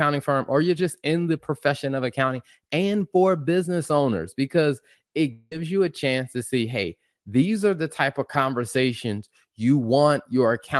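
Just after "for business owners because", from 5.32 to 5.52 s, the audio smears into a fading buzz before "you a chance to" resumes, likely a long network dropout with about 0.19 s lost.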